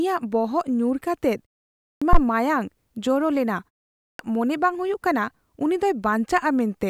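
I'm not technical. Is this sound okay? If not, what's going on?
No. Twice, speech jumps in abruptly out of a short silence with its opening sounds missing: at 1.81 s, after a pause of about 0.4 s, roughly 0.2 s is cut off, and at 3.97 s, after a pause of about 0.35 s, another 0.22 s or so vanishes just before "ᱢᱚᱱᱮ ᱵᱟᱝ". This is a clipped start after a pause. The playback device dozes off during the quiet gap and needs a moment to wake up, so the first fraction of a second of the next phrase is lost.

Right after the first of these, at 2.13 s, there is a brief, deep thump that dies away within about 16 ms. That is a phantom power thump: the power feeding the microphone was switched while it was live, and the sudden jump in voltage came through as a low bump.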